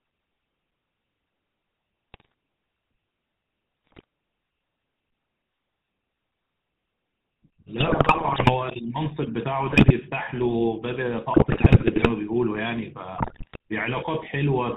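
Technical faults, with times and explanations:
Throughout, GSM full-rate codec: the speech is band-limited with nothing above 4 kHz and carries a buzzy, gravelly roughness that is plainly audible. The codec models the vocal tract as a filter and excites it with a sparse, regularly spaced pulse train, so the fine detail of the voice is replaced by a coarse, grainy texture. This is steady for the whole clip, which distinguishes it from the sudden, short-lived breakups caused by transmission errors.
2.12–2.34 s, 3.85–4.04 s, 7.78–8.55 s, 9.69–9.91 s, 11.34–12.08 s, 13.16–13.56 s, GSM bit errors: the speech bursts into squawks, pops and gargling, with bit error rates of roughly 3 to 7 percent in these stretches. Corrupted filter, pitch and gain values reach the decoder, which warps the spectrum or spikes the level frame by frame. These bursts are brief and erratic and break the speech apart, unlike the constant codec buzz heard throughout the clip.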